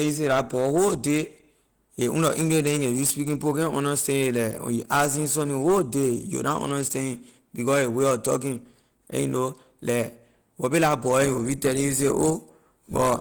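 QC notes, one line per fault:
Throughout, Opus compression: likely a starved Opus encode in hybrid mode, fitting roughly 16 kbps, making the speech plainly hoarse, grainy and muffled despite full bandwidth.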